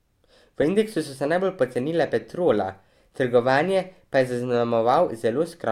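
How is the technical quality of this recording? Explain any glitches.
The recording has one glitch, a short run of CD scratch ticks.

From 1.88 to 2.79 s, just after "indeksu so se najbolj", five clicks of under about 2 ms each recur roughly six times a second. A disc scratch corrupted more data than error correction could repair on each revolution, so the player patched those samples.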